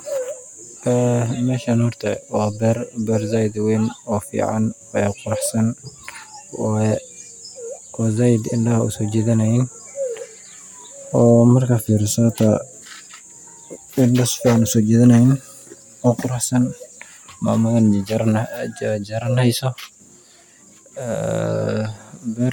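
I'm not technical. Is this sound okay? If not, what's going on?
Yes, the recording has no technical faults to report.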